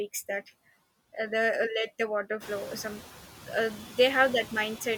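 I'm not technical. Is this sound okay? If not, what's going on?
No. Throughout the recording there are noise suppressor artifacts. A noise suppressor continuously estimates the steady background hiss and turns down the sound wherever it finds it. Here it pushes the background down noticeably between phrases, then lets it back up underneath the speech, so the background noise seems to pump in and out. The room noise gets louder from around two and a half seconds.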